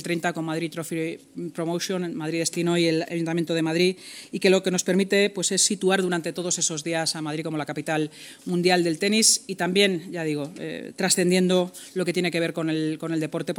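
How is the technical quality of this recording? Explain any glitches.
No glitches to report: the recording holds steady throughout with no dropouts, clicks, level jumps or other transport problems.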